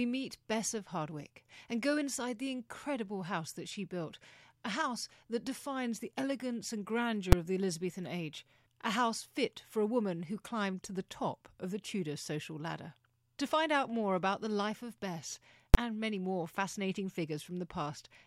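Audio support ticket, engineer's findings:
Two bangs at full scale in speech: 7.32 s, after "defines the elegance and", before "of the"; 15.74 s, just before "and many more fascinating". Invalid numbers at full scale from a DSP stage: an infinite or invalid result was clamped to maximum output for one block, about 5 ms then 10 ms, which fits a short processing block. Blocks this short fuse into one bang. A click or dropout is a brief discontinuity or gap; this is a loud burst at the output's maximum level.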